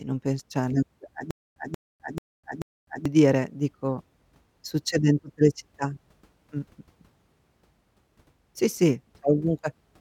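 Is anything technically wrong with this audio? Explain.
Yes. A stutter with silent gaps runs from 1.31 to 3.06 s, just before "dire dico succede in". A short 183 ms fragment of speech plays four times, each followed by about 254 ms of dead digital silence, giving an even 437 ms rhythm. The likely cause is a stalled player or stream that replayed its last buffered fragment at each retry and then ran empty. The speech that belonged in that stretch is missing.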